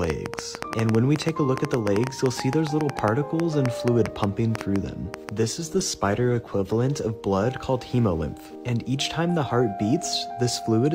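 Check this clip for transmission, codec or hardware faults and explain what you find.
Two faults are audible: a train of clicks through the first half and a call bitrate drop shortly after.

From 0.04 to 5.30 s, a train of clicks ticks over the sound at an uneven pace, about 7.2 per second, roughly forty in all, each peaking around 15 dB above the audio. They likely come from nearby equipment interference or a faulty connection or power supply. The pulses share one shape and persist through pauses, unlike random crackle.

From 5.67 to 6.83 s, a call bitrate drop takes the stream from 96 kbps to 17 kbps, holding the floor for about 1.09 s. Opus codes more coarsely and trims the highs, so the sound turns muffled and watery. It stays continuous, unlike packet loss, which leaves gaps or stutters.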